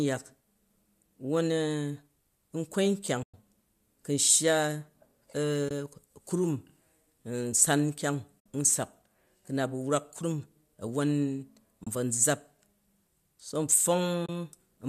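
The speech drops out five times, at 3.23 to 3.34 s, 5.69 to 5.71 s, 8.40 to 8.46 s just before "n sak", 11.84 to 11.87 s and 14.26 to 14.29 s. These are AAC frame loss with muting. Lost frames were replaced with silence, likely in a low-delay AAC stream. The gaps last about 110, 20, 60, 30 and 30 ms, which fits runs of 10 ms frames. Each is a soft-edged hole that fades out and back in.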